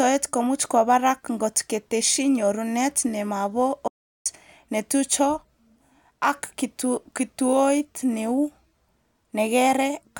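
At 3.88 s, right after "ngot keteshi nyorunet nemabo", the speech cuts to an audio dropout to silence lasting 0.38 s, until 4.26 s. Unlike a natural pause, even the room tone vanishes, leaving plain silence, likely from a lost input link or stray mute.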